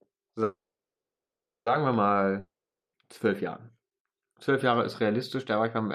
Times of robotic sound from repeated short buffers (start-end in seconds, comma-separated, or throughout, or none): none